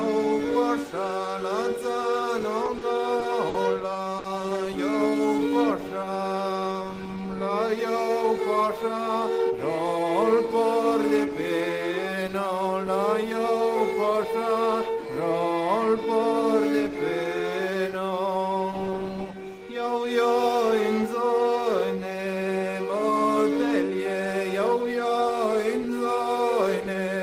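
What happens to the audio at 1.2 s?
Nothing goes wrong at 1.2 s; the audio runs through that moment intact, with no dropout, click or other fault.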